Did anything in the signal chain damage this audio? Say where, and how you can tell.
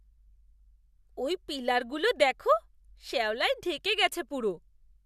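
No, nothing stood out on listening that would point to damage at any stage of the signal chain.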